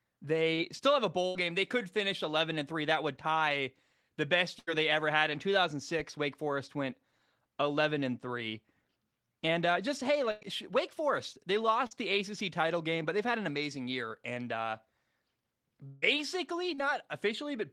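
Speech running about 18 seconds carries three kinds of network fault. Short concealed packet loss at 0.55–0.59 s, 11.87–11.93 s and 16.74–16.80 s fills 20 to 40 ms gaps with a brief smear or wobble, too short to be heard as a hold. Burst of packet loss at 1.27–1.37 s, 4.59–4.69 s and 10.31–10.43 s drops 80 to 100 ms. Each is heard as a held buzz or fading hiss before the sound jumps ahead. At 15.87–16.04 s, a 160 ms stretch sounds like a long network dropout, likely a brief loss of the whole stream. The fill there fades for about 150 ms but never reaches silence before the audio resumes further on.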